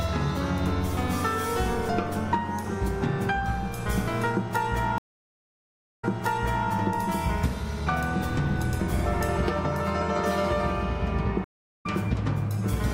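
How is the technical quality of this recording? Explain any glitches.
The recording has two stream reconnect glitches. At 4.98 to 6.69 s the audio drops out for about a second, then resumes roughly 0.7 s earlier, replaying a stretch. At 11.44 to 11.86 s there's a 0.36 s gap, after which it jumps ahead about a third of a second. Each time the connection broke and the player restarted its decoder mid-stream.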